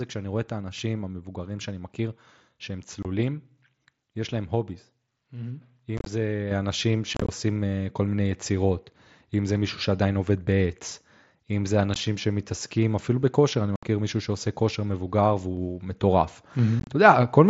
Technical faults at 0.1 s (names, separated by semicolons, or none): none